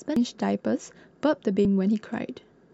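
At 0.16 s and again at 1.65 s the speech hits damaged data in the compressed stream: corrupted bytes make the decoder misread those frames and lose sync while it hunts for the next frame header, leaving a brief glitch each time.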